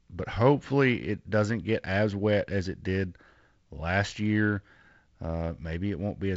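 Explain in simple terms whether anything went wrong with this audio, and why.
Nothing went wrong here: the speech comes through ordinary G.722 wideband telephone coding, which carries sound up to about 7.7 kHz and adds only the light, expected touch of that phone-style coding.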